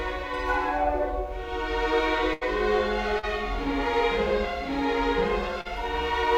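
A burst of packet loss hits this music clip at 2.33 to 2.43 s: roughly 80 ms of audio in a row never arrived in time. The receiver covered about 77 ms of that hole by stretching the last received sound and fading it down, so the music freezes into a held, dimming sound before jumping ahead, with that stretch of the performance simply gone. Short concealed packet loss follows at 3.19 to 3.25 s and again at 5.61 to 5.67 s, each time with about 40 ms missing. The decoder patched these brief gaps, about 37 and 42 ms, by extrapolating from the preceding audio and then crossfading back into the real signal. Each one sounds like a quick smear or wobble in the music, and any very short attack landing inside the gap can disappear.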